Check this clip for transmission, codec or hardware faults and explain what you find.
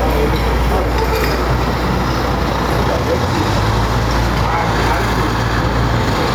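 One fault runs through the whole clip: gain pumping. Loud and soft parts sit closer in level and the sound is squashed, with the level swinging by around 5 dB. Likely cause: input gain set far too high, with a fast limiter clamping every peak. The waveform shows flattened, uniform peaks.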